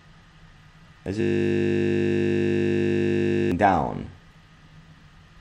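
From 1.21 s to 3.52 s the audio collapses into a steady buzz at 50 Hz: a system hang loop, where a 20 ms slice repeats exactly over a hundred times because the computer froze while the sound hardware kept cycling its ring buffer.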